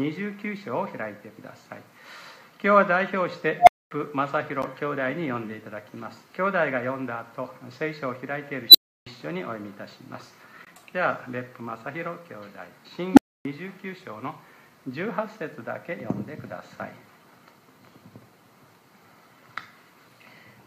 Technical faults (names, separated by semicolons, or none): unstable filter; gap between stream segments